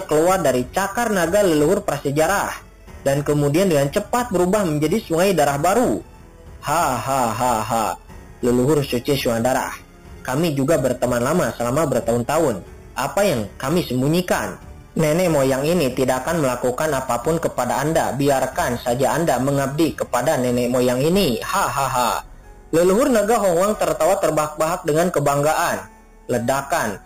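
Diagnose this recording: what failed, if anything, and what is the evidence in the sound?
Imaging from sample-and-hold upsampling at the rate-conversion stage throughout: an 8 kHz source held up to 44.1 kHz without smoothing leaves a metallic fizz at 4 to 8 kHz, about -16 dB, that tracks the signal, unlike steady hiss.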